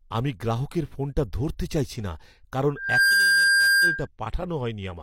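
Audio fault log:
2.76–4.07 s, loudspeaker feedback squeal: just after "চাইছি না কারণ", a single tone near 1.6 kHz swells up over about a third of a second and then holds at roughly 10 dB above the speech until it stops at 4.07 s. A microphone is picking up the loudspeaker it feeds, and at that frequency the loop gain exceeds one, so the tone keeps growing. That build-up separates it from a steady interference whistle, which would start at full level.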